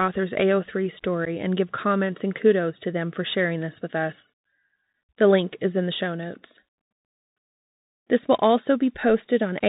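The speech runs throughout over a Bluetooth CVSD headset codec, a 64 kbit/s delta modulator sending one up-or-down bit per sample with an adaptive step. Nothing above 4 kHz survives, sibilants turn scratchy, loud bright moments distort, and a granular hiss sits underneath.

From 1.25 to 1.28 s there is unconcealed Bluetooth headset packet loss. Roughly 11 ms of audio, which points to a few lost packets, was replaced with silence or an idle pattern, leaving a brief hole with abrupt edges and a momentarily quieter return.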